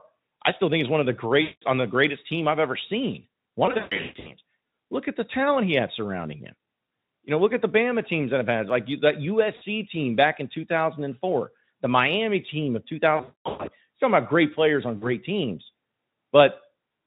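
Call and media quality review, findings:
VoIP packet loss concealed by the speech codec, at 1.41–1.62 s, 3.65–4.34 s after "team I've ever seen", 9.55–9.62 s, 13.15–13.69 s after "team of" and before "you're talking about great", and 14.97–15.06 s after "about great players on". The decoder stretches the last pitch and filter into a buzzy tone or coloured noise that fades, and the sound stays weak after packets resume. Gaps are filled rather than silent, which rules out a plain dropout. The Speex stream at 18.2 kbps shows little or no codec damage.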